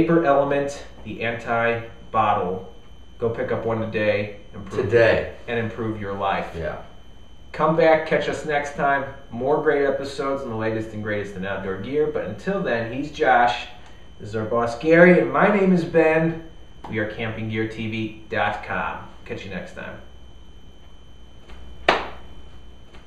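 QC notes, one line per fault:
21.52 s to end, doubled audio track: a second, full-band copy of the sound cuts in abruptly and runs to the end, trailing roughly one and a half seconds behind and about as loud as the original, with no decay or room colour. Likely a second capture via a slower path or two misaligned copies in an edit. On a spectrogram the same patterns recur, shifted right by that delay. The waveform shows a sudden rise in density at the onset.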